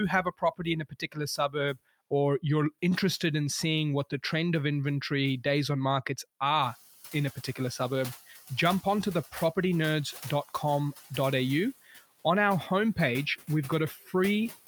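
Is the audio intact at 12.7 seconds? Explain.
No. At 12.7 seconds the background noise dips in the gaps and swells back beneath the speech. These are noise suppressor artifacts, present throughout the clip. The suppressor cuts the bands it judges to be steady noise by about 9 dB, frame by frame. Here that noise is the room noise, which rose by about 18 dB from around 6.5 seconds.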